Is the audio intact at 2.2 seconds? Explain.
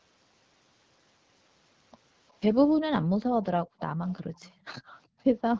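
Yes, at 2.2 seconds the speech is intact, carried cleanly through the call's microphone processing and the AMR wideband (HD Voice) codec at 12.65 kbit/s without any fault at that moment.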